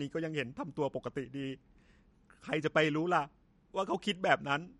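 Throughout, MP3 compression at what sounds like a low bitrate near 49 kbps likely stripped everything above 11.1 kHz, leaving the speech dull and audibly watery.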